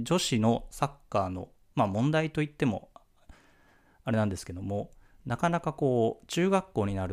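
A block size mismatch (truncated) runs from 6.08 to 7.12 s: the tail of each block is discarded, leaving a 43.1 Hz buzz, consistent with 1024-sample blocks, while the pace stays normal.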